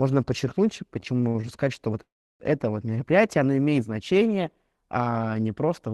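From 1.00 to 1.44 s the speech stutters in repeated stalls: six brief gaps, the longest 60 ms, together about 128 ms, where the jitter buffer ran dry and the last sound was stretched. On a spectrogram, short horizontally smeared stretches interrupt the syllables; nothing is lost.

At 2.02 s, right after "что вот", a call audio freeze holds for 0.38 s. A continuation of the last sound fades, leaving roughly 330 ms of near-silence, flat in the waveform and blank in the spectrogram, before "это вот мероприятие оно" resumes, likely from packets held up in transit.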